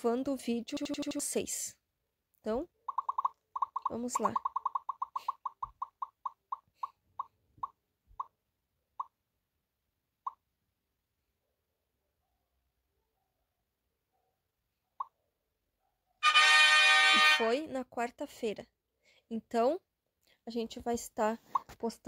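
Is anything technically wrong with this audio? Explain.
Yes. From 0.77 to 1.2 s there is a system hang loop. The system stalled while the audio hardware kept replaying its ring buffer, so one 85.33 ms slice repeats exactly five times, a rate of about 11.7 Hz, which fits a 4096-sample buffer. It sounds like a rapid machine-gun stutter, and roughly 0.4 s of audio is lost. Unlike a dropout, it brings no silence, and unlike packet-loss concealment, every repeat is identical rather than smeared or fading.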